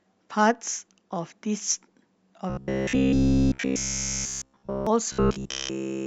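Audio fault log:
2.50 to 4.87 s and 5.12 to 6.07 s, robotic sound from repeated short buffers: the speech becomes a rigid metallic buzz at 66.7 Hz, with essentially all of it repeated. This likely comes from a roughly 15 ms buffer being replayed while fresh audio is skipped.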